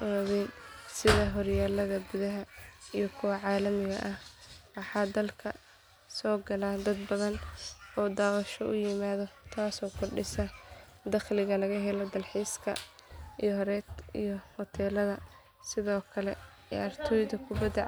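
Nothing in this recording of speech trips any alarm, since there's no technical fault to point to anywhere along it.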